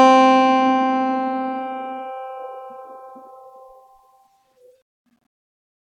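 Nothing in this bit of music trips the ear as a technical fault; it just carries on as it should the whole way.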